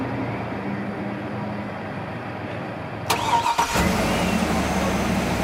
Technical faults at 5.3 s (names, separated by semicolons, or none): none